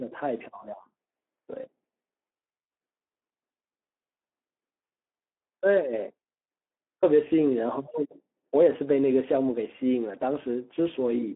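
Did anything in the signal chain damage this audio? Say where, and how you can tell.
Yes. The damage is at the codec stage and runs through the whole speech clip: a Speex codec at a low setting. The speech sounds hoarse and grainy, which fits a bitrate around 11 kbps. The excitation gets too few bits, so the voiced harmonics break up into coded noise. The band runs from 250 Hz to 3.4 kHz, with nothing above 3.8 kHz. Plain telephone band-limiting would sound muffled but clean, not rough like this.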